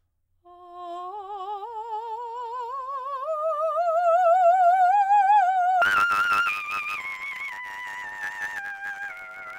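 From about 5.82 s to the end at 9.58 s, the music falls apart into a robotic buzz at 100 Hz. That's planar audio read as interleaved. Each 10 ms block of left-then-right samples gets played as alternating pairs, and the blocks are so short there's no clear octave jump.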